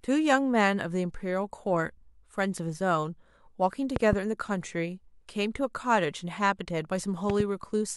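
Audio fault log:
3.96–4.15 s and 7.30–7.43 s, loud pop: two quick pops each time, about 15 dB then about 10 dB above the speech, which continues underneath. The likely cause is a sudden voltage step, from a plug, switch or static, added to the signal.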